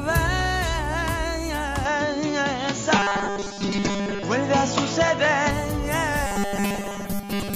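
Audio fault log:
1.85–5.51 s, input switched to a poorer device: the sound abruptly goes duller, with a narrower band and a faint new noise floor well beneath it. There's no gap at the switch and the level barely moves. It likely dropped to a narrower-band microphone, then came back.
2.96–4.24 s and 6.27–7.55 s, robotic sound from repeated short buffers: a stiff metallic buzz at 200 Hz appears. That's likely a 5 ms chunk being looped to cover late audio, with most of the real signal skipped, so the repetition rate sets the buzz.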